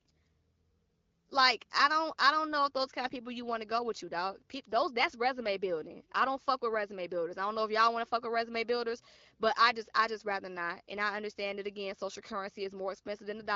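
No technical faults are audible anywhere in this recording.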